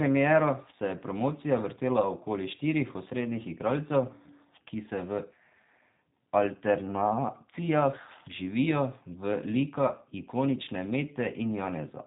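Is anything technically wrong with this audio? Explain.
Yes. The whole clip has been through a G.729 codec, most likely at 8 kbit/s. Nothing above about 3.8 kHz survives, and because the speech is rebuilt from a vocal tract filter, a pitch predictor and a few pulses per frame, it comes out noticeably rough and synthetic.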